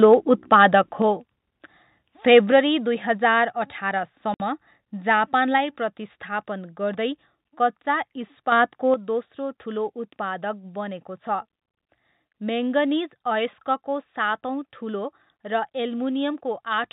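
From 0.03 to 0.75 s the speech has a harsh, crackling edge on its loudest syllables, likely microphone overload. Peaks drive about 3 dB past the converter's ceiling, so a small fraction of samples, under one percent, are sheared flat. On a waveform the tallest excursions show squared-off tops pinned at the converter's limit. On a spectrogram each clipped peak throws faint vertical smears of added harmonics across the band.

At 1.02 s the voice and background drop together by about 4 dB, likely a microphone volume stepped down by the call software reacting to that distortion. The waveform envelope shrinks in a single step with no ramp, and the spectrogram darkens uniformly at that instant.

Overload returns from 2.31 to 2.39 s, just before "दुई हजार". It is about 2 dB over, and roughly 3 percent of samples are flattened in that short burst, which gives a brief gritty crackle and clipped, flat-topped peaks. 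Further step-downs follow at 2.52 s (about 4 dB), at 3.54 s just after "दुई हजार" (about 2 dB), and at 5.58 s (about 2 dB). Each is an abrupt, uniform level drop.

From 4.34 to 4.40 s there is packet loss filled with silence. A 60 ms hole cuts the sound, which fits three lost 20 ms packets replaced by silence. The waveform shows a flat line with hard edges, and the spectrogram shows a clean vertical blank stripe.

At 8.52 s, right after "गर्दै कच्चा", a sudden gain jump of about 7 dB lifts sound and noise together until 8.94 s, likely a digital gain applied without smoothing. It shows as a step up in the waveform envelope and a brighter band across all frequencies. Inside it, at 8.64 s, another step down of about 2 dB occurs. The whole clip is band-limited to 4 kHz by the G.711 telephone coding, which is working normally.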